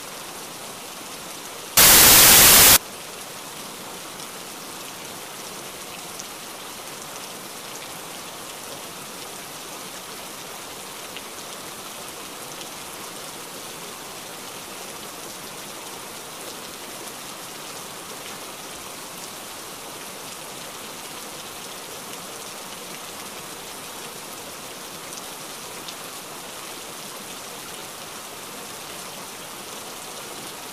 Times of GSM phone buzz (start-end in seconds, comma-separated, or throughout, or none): none